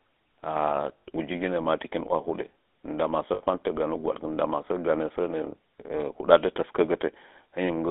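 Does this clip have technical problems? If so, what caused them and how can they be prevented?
Yes. The GSM full-rate codec runs throughout. Its pulse-driven vocal-tract model gives the speech a plainly audible buzzy, gravelly roughness, with the band held to about 250 Hz to 3.6 kHz, which fits 13 kbps full-rate coding. Using a wideband or higher-rate codec would avoid this.

Lost GSM frames occur at 0.98 to 1.03 s, just before "uji ginə ma takin", and at 3.34 to 3.42 s. In each, 60 ms of speech was replaced by repeats of the last good frame, heard as a brief metallic ring, consistent with three dropped frames. A cleaner radio link or stronger error protection would prevent these losses.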